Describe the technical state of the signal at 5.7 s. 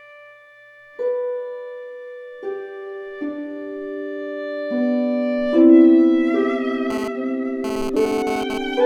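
Nothing at 5.7 s points to a fault; the signal there comes through intact, with no dropout, click, distortion or other disturbance to be heard.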